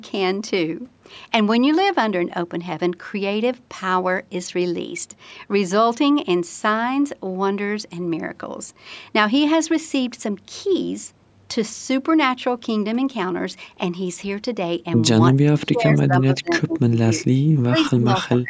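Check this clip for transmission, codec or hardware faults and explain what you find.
Two problems show up near the end of the speech, both typical of a hands-free call.

Speech suppressed in double talk, from 15.35 to 17.26 s and from 17.47 s to the end: the echo canceller likely mistook overlapping talk for echo and clamped down, so the speech drops by up to roughly 30 dB and breaks up.

Echo leak, at 17.79 to 17.84 s: residual loudspeaker echo likely slipped past cancellation, leaving a brief faint copy about 25 dB down, delayed 352 ms.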